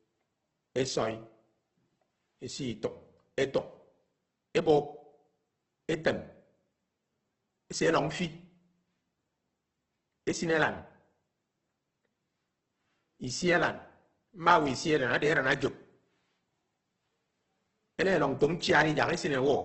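Speech encoded throughout with what is likely Opus compression in its CELT music mode, at a heavy setting that fits roughly 12 kbps: band energies survive but detail is filled in, so the voice turns grainy and rough, with nothing above 8.2 kHz.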